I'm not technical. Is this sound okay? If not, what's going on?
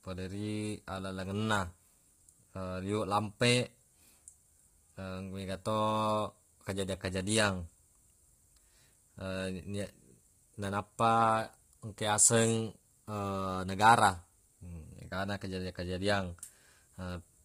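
No. The speech was likely squeezed through low-delay AAC compression, the kind video calls use, and squeezed hard. Throughout, the voice sounds rough and grainy, with hiss between its tones, and nothing is left above about 15.6 kHz.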